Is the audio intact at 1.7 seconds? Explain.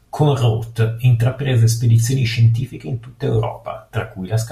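Yes, the speech at 1.7 seconds is intact, with no dropout, distortion or other fault at that moment.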